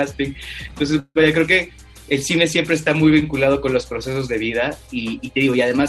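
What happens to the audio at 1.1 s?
From 0.99 to 1.17 s there is a call audio freeze: the last sound is stretched into a fading buzz for about 160 ms, ending in roughly 40 ms of silence, then resumes where it stopped, 160 ms late. The likely cause is delayed packets draining the jitter buffer.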